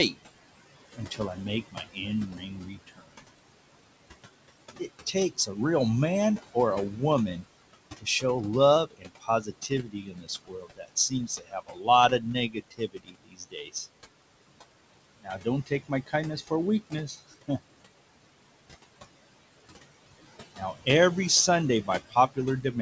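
Noise suppressor artifacts run through the whole clip. The room noise, about 14 dB below the speech, is pulled down by about 21 dB between phrases and rises again under them. Codec noise would stay steady, but this pumps in step with the speech.

Speech cut by the noise suppressor occurs at 0.97–3.24 s, 4.79–5.57 s, 6.39–8.23 s, 8.87–13.75 s, 15.19–17.82 s, 20.55–20.87 s and from 21.83 s to the end. Soft consonants and word endings are swallowed along with the background, by up to about 21 dB. The 8.87 s stretch loses roughly three seconds in total. A dropout would cut out abruptly, but these parts fade and go faint.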